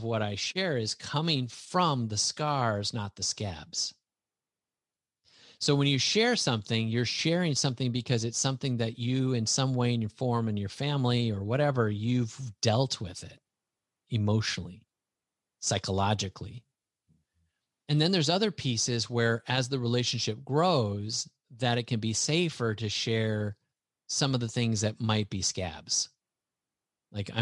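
A speech recording with nothing technically wrong that can be heard in it.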